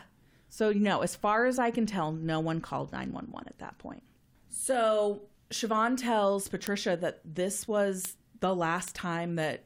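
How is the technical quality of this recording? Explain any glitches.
The recording's technical quality is compromised by a steady train of sharp clicks throughout the speech.

Word clock ticks run from 0.30 s to 9.43 s, about every 0.3 s. The receiver's clock drifts roughly 70 ppm from the sender's, so each slip drops or repeats one sample. The result is sharp, uneven ticks that appear as thin vertical spectrogram lines and tiny waveform steps.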